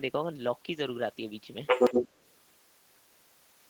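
From 1.66 to 2.36 s there's the other side's voice leaking through, noticeably louder than the main speech, likely left behind by an echo canceller that didn't fully clear loudspeaker pickup.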